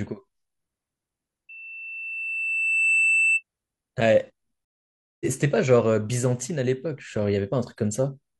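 Loudspeaker feedback squeal runs from 1.49 to 3.43 s in this speech recording: a microphone is catching its own loudspeaker, and at 2.7 kHz the loop gain passes unity, so a pure tone swells over roughly a second and a half until it sits a few decibels above the speech. A stream reconnect follows at 4.65 to 5.25 s, where the connection dropped, leaving about 0.56 s of silence before a fresh decoder picks the stream up again roughly half a second further on, so that stretch of speech is skipped rather than delayed.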